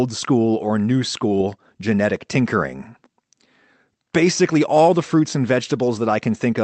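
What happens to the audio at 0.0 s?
Nothing goes wrong at 0.0 s: the speech starts intact, with only the ordinary character of a call path.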